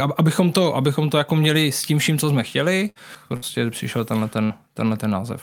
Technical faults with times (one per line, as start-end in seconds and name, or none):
2.89-2.98 burst of packet loss
3.15 CD skip
3.36-3.45 burst of packet loss
4.44-4.53 burst of packet loss